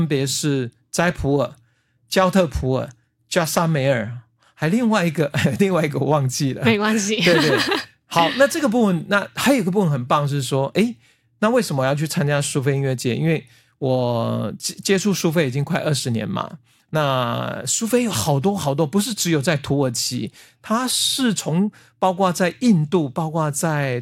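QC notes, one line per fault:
1.74–5.74 s, adaptive stream at a lower bitrate: for 4 s the speech abruptly loses crispness, with swirly artefacts appearing, then snaps back with no gap either side. This points to a drop from around 96 kbit/s AAC to a 48 kbit/s HE-AAC rendition, where upper frequencies are reconstructed rather than coded. On a spectrogram the top band turns blotchy and smeared between sharp vertical edges, while the waveform stays continuous.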